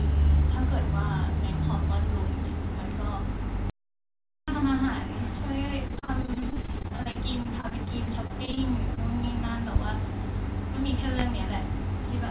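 Speech heard through a call path whose band stops at 4 kHz, which fits G.711 A-law at 64 kbps, with several distinct faults. From 3.70 to 4.48 s there is a playback stall. The sound stops dead for about 0.78 s and then resumes. The gap is true silence rather than synthesized filler, which separates it from packet loss concealment. The likely cause is a player that ran out of buffered data or had its output thread blocked, so nothing reached the output until it recovered.

Between 5.88 and 8.59 s comes repeated packet loss with a robotic sound. Short holes, none longer than 36 ms, arrive one after another. Each is patched by stretching the preceding sound, and about a quarter of that stretch ends up concealed. Because the repairs follow so closely, the result is a choppy, robotic texture with fragments missing, not a single isolated glitch.

At 8.95 to 8.99 s there is one short concealed packet loss. 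About 20 ms never arrived and was bridged by extending the last sound before blending back in. It is heard as a brief smear or wobble. Because it is isolated and has no spike, it is distinct from both the robotic stretch before it and the pops after it.

Finally there is a loud pop at 9.76 s, about 20 dB above the signal, and another at 11.19 s, about 15 dB above. Each is a sharp transient sitting on top of the speech, which carries on underneath without a gap. That continuity marks them as added pulses rather than dropouts, likely from a switch, static discharge or driver glitch injecting a voltage step.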